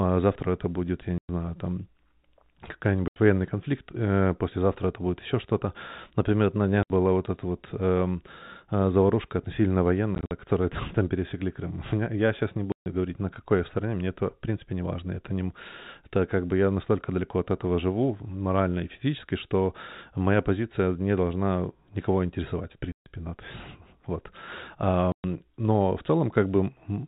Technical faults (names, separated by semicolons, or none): packet loss filled with silence